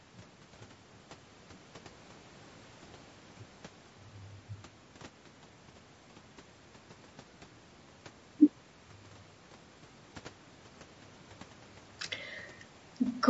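Right from the start and all the way through, the speech has a rough, grainy edge, with a hiss-like fuzz sitting in the gaps between the pitch harmonics, so voiced sounds lose their clean ring. That's most likely low-delay AAC compression, AAC-ELD as used in video calls, whose short frames can't pin down the harmonics well, and the damage level fits a bitrate around 32 kbps. The top stops near 8 kHz, which is just the call's microphone processing.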